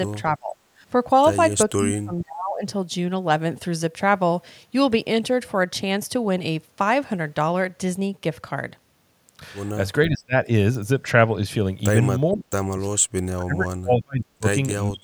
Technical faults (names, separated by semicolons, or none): speech suppressed in double talk; echo leak